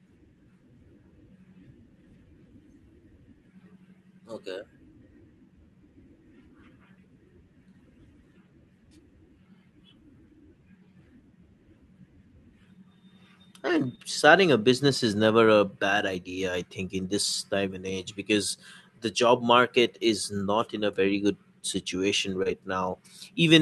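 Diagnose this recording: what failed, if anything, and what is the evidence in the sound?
Short concealed packet loss at the network stage: packets went missing at 13.95 s, just before "starting a business is", and at 22.43 s, after "a very good situation". The decoder bridged each hole by extending the preceding sound, leaving a brief smear.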